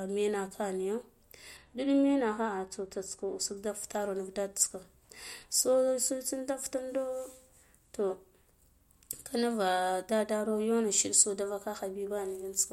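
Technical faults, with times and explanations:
1.57 to 3.57 s, de-emphasis applied wrongly: right after "menake nijo" the speech turns dull and muffled, then regains its treble at "da fitaro nut". The high end falls away smoothly rather than being cut at a hard edge, sitting about 11 dB down at 10 kHz against 1 kHz. A treble cut meant to undo pre-emphasis was used on this section either when no pre-emphasis was present or a second time, so it removed real high-frequency detail.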